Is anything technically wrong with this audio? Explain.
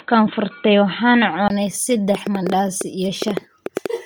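Yes, there are three faults.

Bluetooth LC3 compression runs through the whole clip. The speech has a breathy, grainy edge, as if a layer of fine noise were woven into the upper part of each sound, and the coding damage is heavy. This is likely LC3, the Bluetooth LE Audio codec, working at a low rate that fits about 32 kbps and 10 ms frames. At that rate the encoder discards much of the fine high-frequency detail and fills the gaps with synthetic noise. The band still extends to about 20.2 kHz, so the grain comes from that coarse coding rather than from a narrowed band.

Input switched to a poorer device, from 0.0 to 1.5 s. The first second and a half sounds dull and boxy, with nothing above 4.1 kHz, a loudness about 5 dB different, and a faint added hiss far below the speech. At 1.5 s there is a 20 ms silence, then the sound opens up and becomes clearer. The likely cause is the recording system capturing the opening from a narrower-band microphone or headset path before switching to the proper input.

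A train of clicks runs from 2.15 to 3.87 s. Sharp ticks pop over the speech at about 7.6 per second on an uneven beat, roughly fifteen in all, and they stand well above the speech level. Because the pulses are similar in shape but irregular in timing, they likely come from electrical interference or a faulty connection or power supply injecting brief spikes into the signal.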